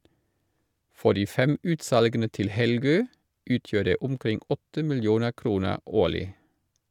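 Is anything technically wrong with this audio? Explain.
No, nothing technically wrong turns up anywhere in this speech recording.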